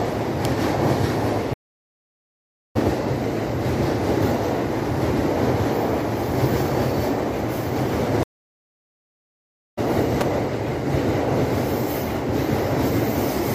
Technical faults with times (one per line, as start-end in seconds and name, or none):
0.45 electrical switching spike
1.53-2.77 stream reconnect
8.23-9.79 stream reconnect
10.21 electrical switching spike